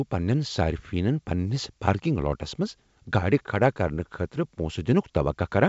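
No faults are audible in this speech, which carries G.722 wideband telephone coding at 64 kbit/s with at most a faint trace of the coding.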